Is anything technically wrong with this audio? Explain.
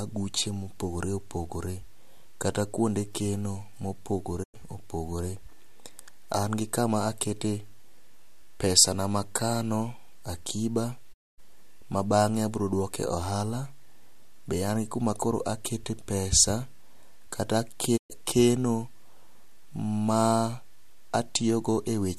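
Yes, there is a digital broadcast dropout at 4.42 to 4.56 s, after "pesa na amakano akiba" at 11.12 to 11.40 s, before "ma bang'e", and at 17.96 to 18.12 s. Each time the receiver lost valid frames and muted, so the speech fades out over about 20 ms into silent holes of 96, 240 and 120 ms.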